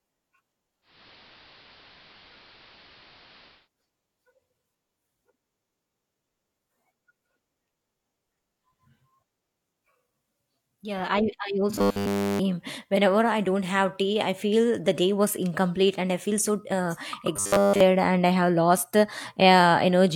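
The clip is speech with two kinds of fault. From 0.81 to 3.69 s there is digital radio blending to analogue: the receiver fades over about 0.24 s to the AM broadcast and back. A hiss rises to about 25 dB below the speech, with no jump in level. On a spectrogram this looks like a noise floor filling the band. At 11.76 to 12.39 s and again at 17.37 to 17.81 s the speech turns into robotic sound from repeated short buffers. It becomes a rigid metallic buzz at 100 Hz that still roughly follows the speech, and nearly all of the real audio is replaced. This is likely caused by the playback repeating its last 10 ms buffer while new audio was late. On a spectrogram the buzz shows as evenly spaced horizontal harmonics at multiples of 100 Hz, and the waveform shows an identical short cycle repeating every 10 ms.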